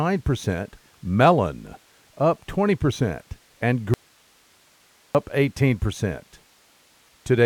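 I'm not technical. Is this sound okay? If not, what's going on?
No. From 3.94 to 5.15 s the speech suddenly vanishes, leaving only faint hiss: an audio dropout to a faint residue, likely a brief break in the signal while the line stayed live.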